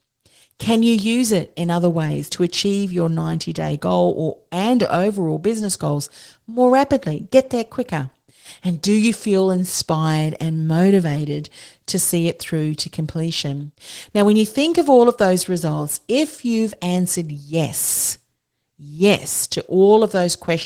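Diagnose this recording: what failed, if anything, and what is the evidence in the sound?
The speech sounds hoarse and slightly robotic throughout. This is Opus voice compression at the codec stage. Hybrid coding, with SILK below 8 kHz and CELT above, codes the excitation coarsely in 20 ms frames, consistent with roughly 16 kbps.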